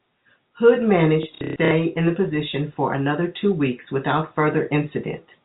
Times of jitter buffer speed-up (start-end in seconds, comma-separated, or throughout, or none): none